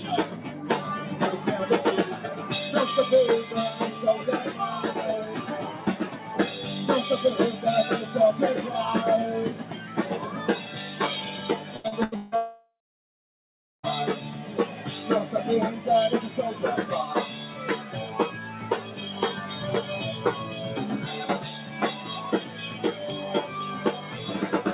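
Throughout, a noise suppressor applied to music or sounds treats steady tones and tails as noise, lowering them by around 5 dB so the level pumps. On a waveform, sustained sections look dented while attacks stay full.

From 0.27 to 0.65 s, from 6.13 to 6.28 s and from 9.57 to 9.96 s, sound is cut by the noise suppressor, sinking about 5 dB. The waveform envelope dips briefly and the spectrogram fades across the band.

From 11.76 to 12.35 s, repeated packet loss leaves four gaps, the longest 160 ms, with about 61% of the span patched. It sounds choppy, with pieces missing, and the spectrogram shows repeated, smeared, striped blocks.

From 12.36 to 13.86 s, a long network dropout is the likely cause of a fading buzz or hiss followed by roughly a second of silence. The waveform shows a decaying tail, then a flat line, and the audio resumes with that stretch missing.

From 14.24 to 14.86 s, sound is again cut by the noise suppressor, dropping about 5 dB. 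The spectrogram dims across that half-second, under the call path's ceiling of 4 kHz.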